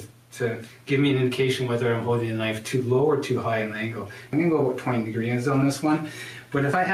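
Gain pumping runs through the whole clip. The level swings by around 10 dB. Loud and quiet passages sit unnaturally close together and the sound is flattened and squashed. The likely cause is input gain set far too high, with a fast limiter or compressor clamping down on each peak.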